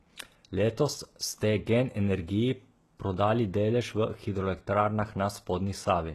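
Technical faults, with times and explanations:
Throughout, HE-AAC compression: the speech has likely passed through a low-bitrate HE-AAC encoder, with damage that fits a rate near 16 kbps. Only the lower spectrum is truly coded, and the treble is rebuilt by copying lower bands upward under a coarse envelope. The top stays bright but synthetic, its harmonics misaligned with those below, so s sounds come out gritty, metallic or lispy, and nothing is present above 12.3 kHz.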